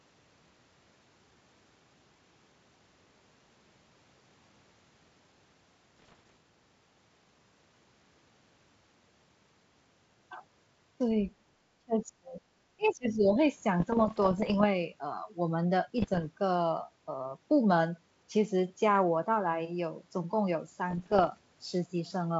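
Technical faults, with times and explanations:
5.97 to 6.36 s, 13.80 to 14.66 s, 15.98 to 16.28 s and 20.90 to 21.39 s, bit errors on an ADPCM link: each stretch carries clicks and gritty, rasping bursts with brief jumps and sags in level. The error rate is under one percent, near one percent in the 15.98 s burst. A flipped bit throws off the decoder's step size and prediction, so each error smears across several milliseconds instead of staying a single click.
11.80 to 12.43 s and 12.76 to 13.39 s, speech suppressed in double talk: the talker's level collapses, by about 30 dB at its deepest in the first stretch and about 20 dB in the second. The likely cause is the echo canceller meeting both sides talking at once. Unable to tell the near voice from loudspeaker echo, it attenuated the microphone path wholesale.
12.82 to 12.93 s, other side's voice leaking through: a faint scrap of a second voice slips in, very low, around 35 dB below the talker, lasting about a tenth of a second inside the second suppressed stretch. 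This is likely echo from the far end playing on the talker's loudspeaker, left over after the echo canceller failed to subtract all of it from the microphone signal.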